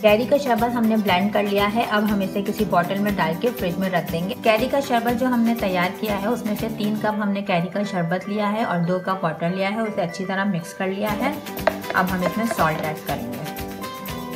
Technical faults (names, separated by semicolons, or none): none